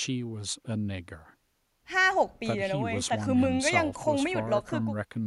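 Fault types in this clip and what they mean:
None: no technical fault can be heard in this speech recording. Nothing in the sound points to a problem at any moment.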